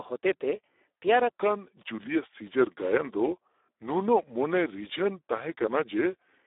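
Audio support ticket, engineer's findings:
Speex codec, whole clip. Hoarse, noisy speech with a buzzy, half-robotic edge; nothing above 3.8 kHz and a narrow band of about 300 Hz to 3.7 kHz. Heavy CELP damage: too few bits for the excitation, so the buzz replaces natural voicing. Sounds like a low-quality setting, around 8 kbps.

Section at the wrong speed, 1.29 s to end. Speech suddenly drags and drops deep, about 0.8x speed and roughly four semitones down, pitch and tempo shifting together. Likely a player or editor resampling that stretch against the wrong clock.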